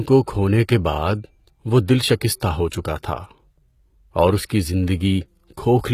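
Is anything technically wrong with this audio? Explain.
Yes. Two faults can be heard.

Throughout the speech, the treble sounds bright but synthetic: sibilants turn gritty and metallic or lispy, and nothing is present above 14.9 kHz. This is likely HE-AAC compression at a low bitrate around 20 kbps. The codec coded only the lower spectrum and rebuilt the upper bands by copying lower ones upward. Because those copied harmonics don't line up with the real ones, the result sounds metallic. A plain low-pass filter would instead sound dull and muffled.

Pre-echo occurs three times. The first is at 2.40 s, between "کے بعد وہ دل" and "ہو چکا", with about 11 ms of spread. The second runs from 2.69 to 2.72 s (31 ms). The third runs from 4.45 to 4.50 s, just after "اور اس" (49 ms). In each case, a short hiss rises just before a sharp onset, and the attack itself sounds softened and smeared. This happens because the transform block spread its quantisation noise, sized for the loud attack, backward into the quiet moment before it. 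Reverb or echo would trail after the sound rather than precede it.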